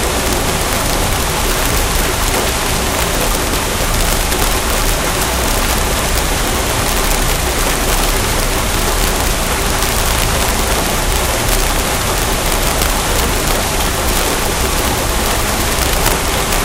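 Throughout the recording, integer overflow corrupts the loudest moments: the signal was driven about 5 dB past the top of the integer range, and instead of being held at the limit, any sample that crossed it wrapped around to the opposite extreme. Only a small fraction of samples, around half a percent, go over, so the damage is confined to peaks, but each one becomes a violent crack far harsher than ordinary clipping.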